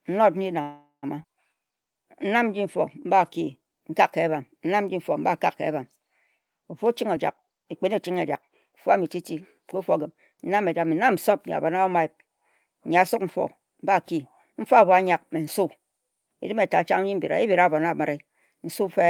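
From 0.61 to 1.05 s the speech halts in a call audio freeze. The last sound carries on as a fading buzz or hiss that thins into about 130 ms of silence, and then the speech resumes exactly where it stopped. The likely cause is packets held up in transit until the jitter buffer ran dry, forcing the receiver to fill roughly 412 ms itself. Unlike a skip, nothing is lost: the stretch is inserted, not cut, and the delay grows by the same 412 ms.

At 1.23 to 1.26 s comes a skip ahead, the opposite case. About a fifth of a second of speech is simply gone, dropped while later audio was already queued, and the two sides are butted together with only a sliver of filler. There is no stall or fading tail, just an abrupt forward jump that takes part of the material with it and pulls the delay back by a similar amount.

From 1.54 to 4.31 s a jitter buffer slow-down sets in. The receiver rebuilt its reserve by repeating single pitch periods and bits of pauses over and over, adding 226 ms in total, so the speech plays at about 92% speed. 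The pitch stays put, which separates this from a slowed recording. Sounds are stretched, the effect spread across nearly three seconds rather than concentrated in one gap like the freeze.

From 6.87 to 9.91 s a jitter buffer speed-up works the other way. With too much audio queued, the receiver trimmed short pieces of one or a few pitch periods many times in succession, removing around 0.4 s and running the speech at about 113% speed. Pitch is unchanged but delivery sounds hurried. Unlike the skip ahead, no single chunk vanishes; the loss is spread thinly across the whole three-second stretch.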